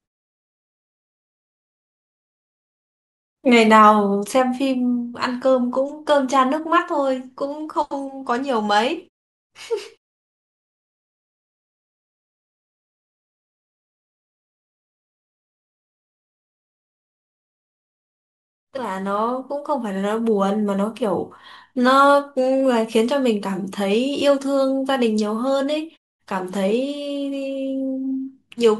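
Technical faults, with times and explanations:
No technical faults found.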